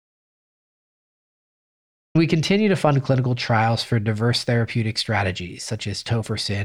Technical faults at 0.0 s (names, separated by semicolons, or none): audio dropout to silence